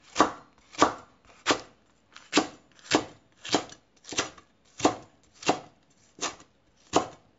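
The sound was likely first squeezed through a low-bitrate MP3 encoder, around 48 kbit/s, and then saved again as a high-bitrate MP3, around 320 kbit/s. This is low-bitrate audio saved at a high bitrate: the larger file cannot bring back what the first pass threw away. Across the whole clip nothing sounds above about 7.6 kHz, so the sounds lack air and crispness, and the artefacts of the first encoding remain.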